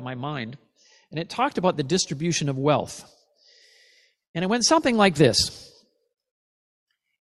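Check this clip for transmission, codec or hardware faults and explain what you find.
Nothing wrong turns up here: the speech comes through with no dropouts, glitches or other transmission, codec or hardware trouble to point to.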